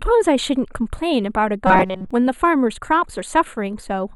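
From the start, the speech has a thin, slightly hollow coloration caused by channel delay (comb filtering). One channel trails the other by a few samples, roughly a tenth of a millisecond, and when the two are summed to mono the shared content cancels where their phases oppose. With so short a delay the first notch falls high, around 5 kHz, so the loss is in the upper presence region. On a spectrogram this shows as a dark horizontal band near 5 kHz that stays fixed for the whole clip.

From 1.67 to 2.11 s the speech turns into a rigid, metallic buzz that still roughly follows the syllables. This is robotic sound from repeated short buffers. Audio likely arrived too seldom and the gaps were filled by looping a short fragment, with most of the real signal in that stretch skipped. The buzz sits at 188 Hz, which fits a repeated block of about 5.3 ms. On a waveform this appears as an identical short cycle tiling the span, and on a spectrogram as evenly spaced harmonics of 188 Hz replacing the natural speech pattern.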